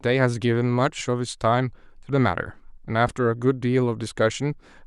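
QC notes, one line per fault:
0.99–1.01 s and 3.07 s, lost LE Audio frames: two brief dropouts of about 15 ms each, which fits a loss of two LC3 frames. The decoder conceals the gap by repeating the last received spectrum with randomised phase signs, so the speech is not cut to silence. Instead, a short noisy smear replaces the tonal detail for that instant. Both gaps are too short for the concealment fade-out to become audible, and the light codec damage across the clip stays faint.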